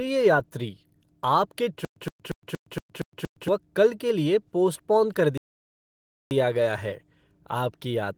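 From 1.85 to 3.48 s there is a stutter with silent gaps: a 118 ms fragment repeats seven times, each followed by about 116 ms of digital silence, a steady 233 ms cycle. This is likely a stalled stream replaying its last buffered chunk at each retry.

From 5.38 to 6.31 s a playback stall cuts the sound for about 935 ms. Unlike the stutter, nothing repeats. The audio simply stops and resumes, probably after the player ran short of data.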